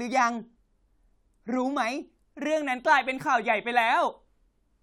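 Nothing stood out as a technical problem anywhere in the speech recording on listening.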